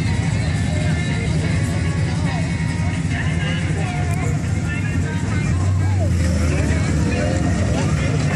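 Brief blips at 1.26, 3.21 and 5.51 s come from damaged data in the compressed stream. The decoder misreads corrupted frames and loses sync.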